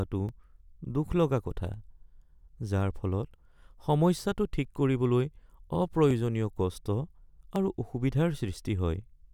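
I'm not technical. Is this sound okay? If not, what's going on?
No. Two pieces of equipment were likely ticking at slightly different speeds, causing clock drift buffer slips. A tiny sliver of sound gets dropped or repeated about every 1.45 seconds, heard as a regular click in the speech from 0.29 to 9.02 seconds.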